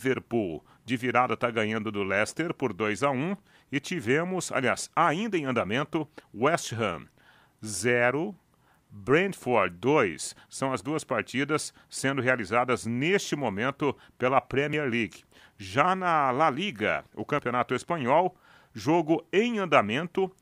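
At 14.73 s and again at 17.39 s the speech jumps forward by roughly 20 ms with no gap of silence. This is likely a dropped buffer (overrun): the samples were overwritten before being read, so the surrounding audio is spliced together directly.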